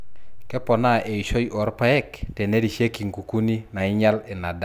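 A speech recording with nothing technically wrong with it.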